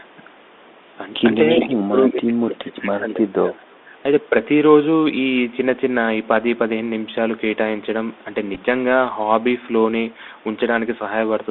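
Throughout the clip, the speech carries the Bluetooth CVSD headset codec sound. Nothing passes outside roughly 250 Hz to 3.6 kHz, a granular hiss sits under the voice, and s sounds turn scratchy. This fits the 64 kbit/s one-bit delta coding, whose adaptive step lags loud high content. It differs from plain band-limiting because of that grainy distortion.

From 1.48 to 1.62 s, a delayed copy of the speech returns about 325 ms late and only slightly quieter than the original, most likely an echo leak through a far-end echo canceller. Fainter scraps follow at 2.50–2.56 s and 3.08–3.13 s, again about 327 ms behind, much quieter each time. The fixed delay is what sets this apart from reverberation.

Between 1.58 and 3.88 s, the near voice dips in pieces totalling around a second and a half, at worst falling by about 30 dB. This is likely speech suppressed in double talk, where the canceller turned down real speech along with echo while both sides spoke. 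It differs from packet loss because the level is turned down rather than the signal being lost.

At 8.55–8.58 s, small ticks mark Bluetooth headset packet repeats. About 15 ms was lost and decoded again from earlier bits across 30 ms, in runs only about 4 ms long. The runs are too short to build the steady 267 Hz buzz of a longer outage.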